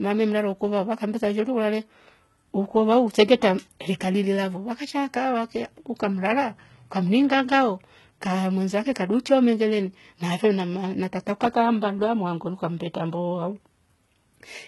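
HE-AAC compression runs throughout the speech, with heavy damage and nothing above 11.8 kHz. The treble sounds rebuilt rather than captured: upper bands copied from lower ones, likely by spectral band replication at a rate that fits about 16 kbps, leaving s sounds gritty and lispy.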